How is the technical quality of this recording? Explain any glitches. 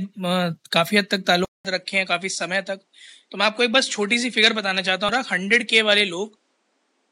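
The recording has two audible glitches, one lasting from early in the speech to the end and one very brief.

At 1.45 s the speech cuts out for 200 ms and returns duller, about 5 dB quieter, with nothing above 10.3 kHz and a faint new background noise roughly 50 dB down. This is likely an input switched to a poorer device. A filter would only narrow the band, whereas here tone, level and noise floor all change at once.

At 5.09 s there is a short glitch. This is damaged data in a compressed stream. The decoder misreads corrupted frames, then hunts for the next frame header and resyncs.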